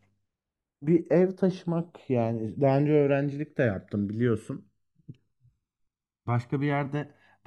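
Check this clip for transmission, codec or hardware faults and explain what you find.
One fault runs through the whole speech clip: channels drifting apart. Throughout, separate clocks about 150 ppm apart let the inter-channel delay creep to roughly a millisecond; in mono, sweeping comb notches sound like slow flanging.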